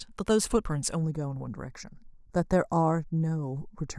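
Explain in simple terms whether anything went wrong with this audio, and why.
Yes, something goes wrong partway through. From about 1.03 s to the end, the speech turns thin and hollow, a bit like it's coming through a tube. That's channel delay (comb filtering): one side of the recording arrives a tiny fraction of a millisecond late, just a few samples, and when both sides get mixed together, certain pitches cancel out. The first gap sits around 3 kHz, right where a lot of speech clarity lives, so it sounds hollow.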